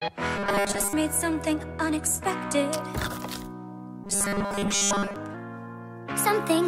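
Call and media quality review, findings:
Robotic sound from repeated short buffers, 0.37–0.93 s and 4.04–5.16 s: rigid 200 Hz buzz, likely starved playout buffer looping 5 ms chunks, most real audio skipped.

Section at the wrong speed, 5.34 s to end: playback 1.12x fast, pitch raised about two semitones, likely clock or sample-rate mismatch in the playback path.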